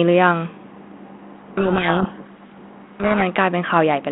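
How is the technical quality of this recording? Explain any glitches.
The recording has one serious glitch: a stretch where the speech turns to harsh distortion, heard over a narrowband telephone line of roughly 200 Hz to 3.4 kHz that fits G.726 ADPCM at 32 kbit/s.

From 1.32 to 3.23 s the speech is buried under rough, grinding distortion. This is a codec payload misread: the G.726 code words arrive with their bit order reversed relative to what the decoder expects, so each sample difference is decoded wrongly.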